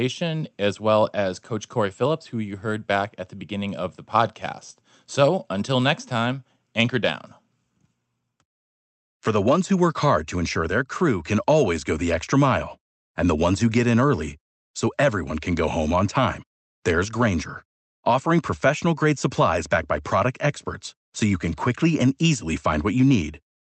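Speech recorded over a call connection, with nothing technically wrong with it at any point.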